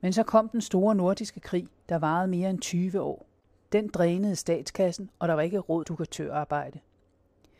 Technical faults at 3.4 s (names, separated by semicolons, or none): damaged data in a compressed stream